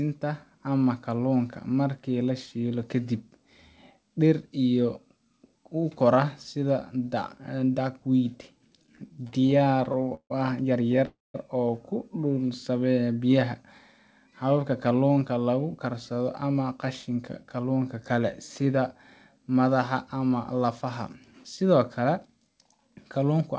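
From 8.74 to 10.32 s the speech drags and stutters, catching on itself about 25 times, the longest hold around 153 ms. These are repeated stalls (stutter): packets kept arriving late, the jitter buffer kept running dry, and the receiver stretched the last sound each time, filling roughly 419 ms, about 27% of that span, with nothing lost.

Between 11.06 and 11.36 s the sound briefly hangs as a fading tail and then drops to silence for about 190 ms before resuming where it stopped. This 286 ms gap is likely a call audio freeze, with delayed packets leaving the buffer empty until they arrived.

From 14.08 to 17.64 s the speech sounds hurried but keeps its pitch, running at about 107% speed. This is a jitter buffer speed-up: holding more audio than it wanted, the receiver trimmed short pitch-period slices in quick succession, removing around a third of a second. Throughout, nothing is heard above 8 kHz, which fits a wideband call codec such as G.722.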